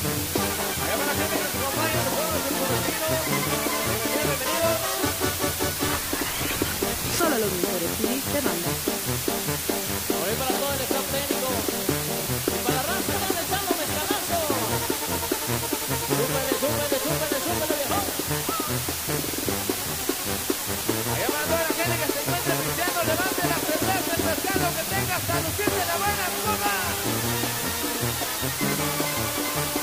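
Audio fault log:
throughout: low bit depth with dither. A steady, even hiss sits over the whole clip, and it's heavy, roughly as loud as the sound itself. The hiss points to something like 3 bits. With so few levels, rounding would normally chew the signal into gritty distortion. Instead, noise was added before rounding, which turns that error into flat white noise that doesn't follow the signal. So you get constant hiss and no crunch.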